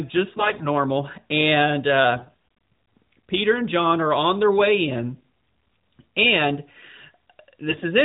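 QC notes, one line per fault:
0.32–0.66 s, 2.16–2.33 s, 5.14–5.23 s (just after "on their way in") and 7.68–7.86 s, AMR bit errors: brief hoarse, gargly roughness while pitch and loudness hold. Weakly protected codec bits arrived corrupted, misplacing excitation pulses and skewing fine gain and spectral values. On a spectrogram, harmonics below the 4 kHz narrowband ceiling blur into grainy noise. The waveform keeps its envelope but loses clean periodicity. The surrounding narrowband coding fits about 12.2 kbps.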